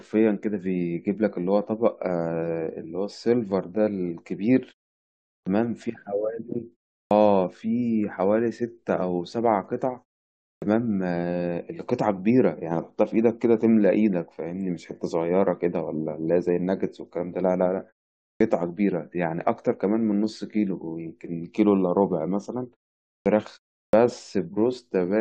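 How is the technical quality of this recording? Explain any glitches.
The speech has a recurring clipped start after a pause, six times: at 5.41, 7.05, 10.56, 18.35, 23.2 and 23.87 s. After silences of 0.37 to 0.76 s, the playback device has dozed off and needs time to wake, so roughly the first 54 to 63 ms of each phrase vanish. Words snap in abruptly, missing their opening sounds. On a waveform, each phrase begins at full amplitude with no rise; a spectrogram shows a hard vertical edge where onset energy should build. The pauses themselves fall silent cleanly as the output mutes between phrases.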